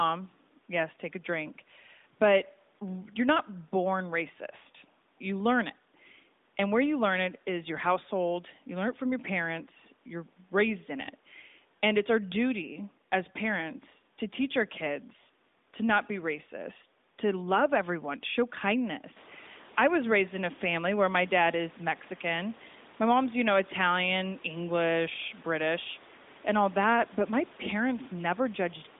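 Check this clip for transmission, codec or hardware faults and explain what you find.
Nothing in the clip points to a transmission, codec or hardware fault. The speech is confined to a narrowband phone line of about 200 Hz to 3.7 kHz with only light AMR-NB coding, which fits the codec's top 12.2 kbps mode, and the room noise steps up by about 13 dB at roughly 19 s while staying about 28 dB below the speech.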